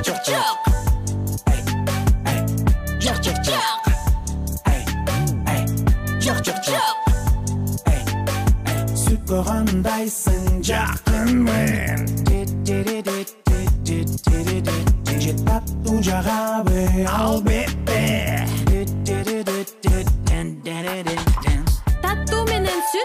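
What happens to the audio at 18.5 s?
Nothing goes wrong at 18.5 s; the audio runs on intact through that moment with no audible fault.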